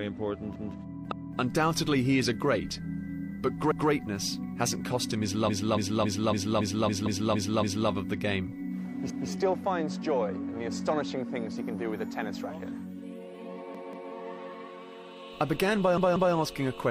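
At 0.56 s a repeated buffer sounds: a piece about 186 ms long plays twice with a hard join, as a brief stutter. The playback device ran short of new audio and replayed its last block, which fits an 8192-sample buffer.

At 1.07 s come repeated frames: a 279 ms block plays again, and the audio runs 279 ms longer. Unlike the buffer repeats, this duplication happened in the compressed stream, so the repeat is frame-aligned and adds time.

A repeated buffer returns at 3.72 s, again a doubled 186 ms piece.

From 5.44 s to 7.85 s the same 279 ms frame block loops eight extra times. This repeated-frames stutter adds about 2.2 s of duplicated sound. Inside it, at 7.06 s, a repeated buffer doubles a further 186 ms piece.

More repeated buffers follow at 9.10 s, then at 13.75 s and 15.98 s. At those last two, the 186 ms piece sounds three times in a row. These device-side repeats hold a fixed 186 ms length and cause no lengthening on the scale of the frame repeats.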